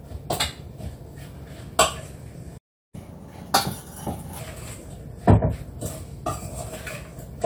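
At 2.57 s the player likely ran out of buffered data, causing a playback stall: the sound cuts to silence for 0.36 s and resumes at 2.95 s. From 2.95 s to 4.39 s the player works through its backlog by resampling, a catch-up at higher speed: the audio runs 1.25 times fast and sits around four semitones sharp, then drops back to normal.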